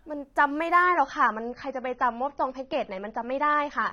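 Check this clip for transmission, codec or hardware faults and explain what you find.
One fault: an adaptive stream at a lower bitrate from 0.83 s to the end. Treble abruptly stops above 6.3 kHz, consistent with a switch from about 96 to 24 kbit/s AAC. Unlike a dropout, there is no gap.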